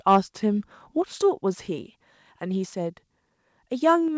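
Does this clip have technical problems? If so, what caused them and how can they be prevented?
Yes. From 0.08 to 0.18 s there is microphone overload, likely from input gain set too high: peaks exceed the converter's limit by about 3 dB, so around a tenth of samples are clipped flat, adding harsh crackle. Lowering the microphone's input level before the call prevents it.

At 1.02 s and again at 4.08 s the microphone volume is stepped down, likely by the call software's automatic gain control reacting to loud input. Voice and background drop suddenly by about 3 dB and then about 4 dB. Starting with a moderate input level keeps the software from making these corrections.

The call path's 8 kHz band limit, with nothing above it, can be heard as a dull top end.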